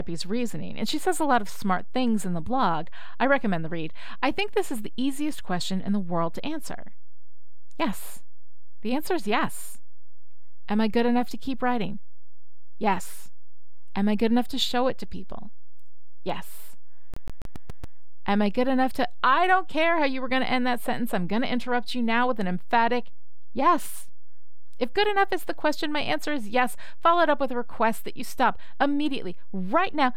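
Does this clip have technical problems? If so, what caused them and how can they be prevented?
Yes. A DC offset runs through the whole clip, inaudible itself but wasting headroom and showing as steady energy at the lowest frequencies. It means the waveform sits shifted from zero by a constant. A high-pass filter or DC-blocking stage at recording prevents it.

From 17.14 to 17.98 s the speech stutters rapidly and evenly, the same 140 ms fragment repeating six times with brief mutes: a CD stuck on one turn, where a scratch keeps throwing the laser back one track. Cleaning or replacing the disc, or ripping it with error-checking software, prevents this.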